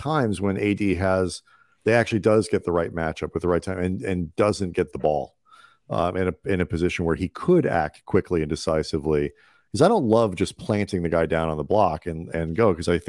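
No technical faults are audible anywhere in the recording.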